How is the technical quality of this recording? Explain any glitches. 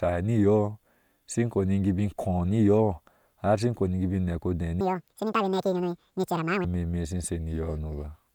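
The recording has one clear glitch. From 4.81 to 6.64 s, the audio is read two samples at a time (double speed). The reader treats each pair of samples as a single frame, as if the file were stereo or used wider samples. So that stretch plays twice as fast and a full octave, 12 semitones, higher. The speech sounds chipmunk-like and rushed.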